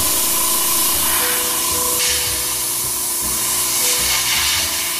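From the start to 1.14 s, one data bit is likely stuck at a fixed value, so about half the samples are pushed off by a step of about -20 dBFS. This stuck bit gives harsh, buzzy distortion, and quiet moments fill with noise.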